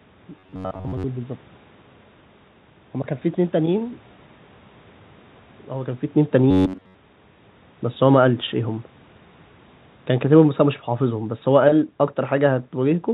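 Robotic sound from repeated short buffers, at 0.39 to 1.05 s and again at 6.51 to 6.95 s: the speech becomes a rigid metallic buzz at 93.8 Hz, likely from new audio arriving too seldom so that most of it is replaced by a repeated fragment of about 10.7 ms. Automatic gain falling, from 10.22 to 13.06 s: the gain control judged the input too loud or its background noise too strong and pulled it down by about 4 dB, so the speech and its background sink together.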